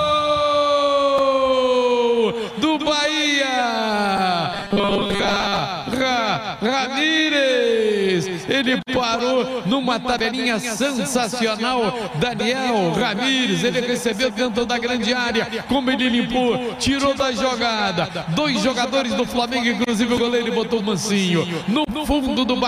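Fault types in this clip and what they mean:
Robotic sound from repeated short buffers: between 4.54 and 5.59 s the sound turns into a stiff, metallic 200 Hz buzz that loosely follows the original. Likely the stream starved, and most of that stretch was filled by looping a chunk that fits a 5 ms buffer.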